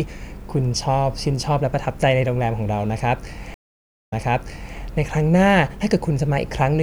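At 3.54 s a stream reconnect occurs. The connection broke and the audio goes silent for 0.58 s. The player then reconnects with a fresh decoder. Speech resumes 0.65 s earlier than where it cut off, repeating a short stretch. It settles by 4.77 s.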